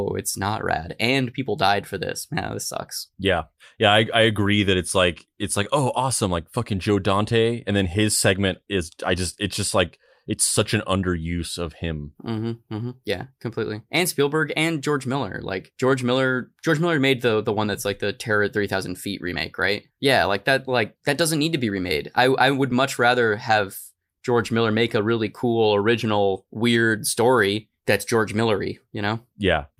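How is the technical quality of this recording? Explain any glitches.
The recording has a clock-matching fault that runs from start to finish, leaving the speech with small, recurring timing glitches.

Clock drift between sender and receiver runs through the whole clip: the sending clock runs about five percent fast, so audio arrives quicker than the receiver plays it out. The jitter buffer keeps overfilling, and the speech carries a faint, persistent unevenness of timing.

Repeated timing corrections appear from 0.03 s to 29.79 s: to keep the buffer from overflowing, the receiver repeatedly discards short slices of the incoming 105 percent stream. Those irregularly spaced cuts are heard as slight hiccups and a wavering, uneven tempo in the speech.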